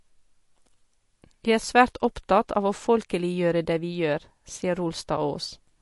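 Speech that sounds watery and swirly throughout, with nothing above about 11.3 kHz; this is likely MP3 compression at a low bitrate, around 48 kbps.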